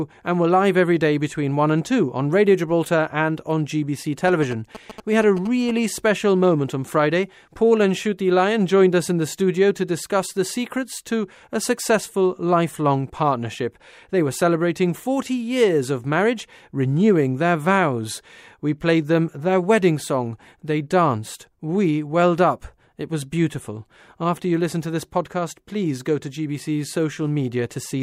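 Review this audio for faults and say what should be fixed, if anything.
From 4.28 to 5.71 s, GSM signalling bursts break into the speech as a galloping run of ticks and short buzzes at about 217 Hz, sitting roughly 15 dB under the voice. A nearby 2G phone sending signalling traffic is being rectified by the audio circuit. Unlike steady mains hum, the buzz comes in clustered stutters and stops. Keep phones away from the microphone, cables and preamp, or switch them to flight mode while recording.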